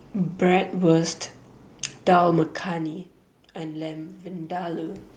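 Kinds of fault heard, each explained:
Automatic gain rising: the gain control sensed the input fall about 15 dB and raised gain about 6 dB over 2.65 to 5.07 s, swelling speech and room noise together.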